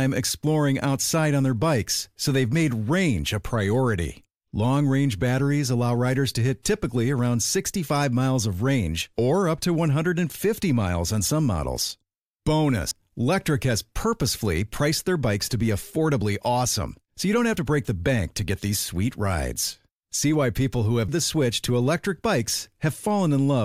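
At 12.91 s and again at 21.08 s, the speech jumps abruptly, skipping roughly a fifth and then nearly a third of a second with no gap. This is likely a dropped buffer (overrun), where unread samples were overwritten and the remaining audio was spliced together.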